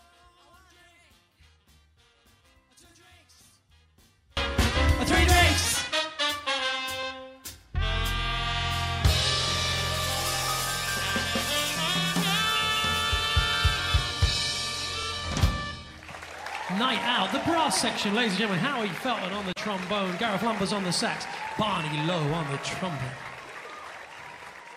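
From the start until 4.37 s the sound is almost absent, sitting about 35 dB below where it should be, with only a faint remnant left. The likely cause is one channel inverted: one side of the stereo pair has its polarity flipped, so whatever both channels share cancels when they are summed to mono, and only the small difference between them survives. After 4.37 s the level returns as the channels stop cancelling.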